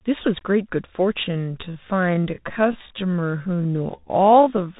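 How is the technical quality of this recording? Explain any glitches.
The technical quality is poor, with two faults. A Bluetooth CVSD headset codec narrows the sound throughout. Nothing passes above 3.8 kHz. One-bit up-down coding fits a 64 kbps link. It leaves scratchy sibilants and granular hiss.

A time-stretched section runs from 1.22 s to the end. Pace drops to about 0.56 times speed while pitch holds. Repeated short pieces, likely from stretching software, make it drag.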